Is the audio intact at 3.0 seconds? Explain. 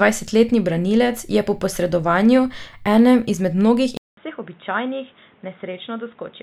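Yes, at 3.0 seconds the speech runs intact, with no dropout, click, distortion or other fault at that moment.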